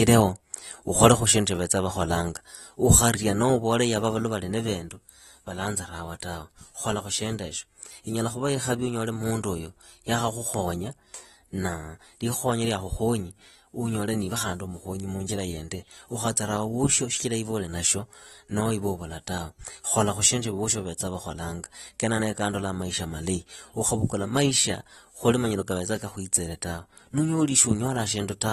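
From start to finish the speech sounds dull and smeared, with a fizzy, warbling edge on sibilants. A spectrogram shows a hard ceiling at 12.4 kHz. The likely cause is AAC compression at a low bitrate, around 32 kbps.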